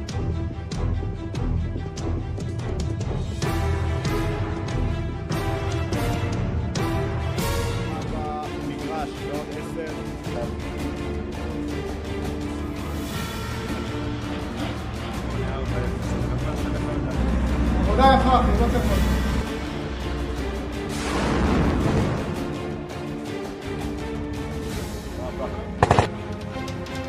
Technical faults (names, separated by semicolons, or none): none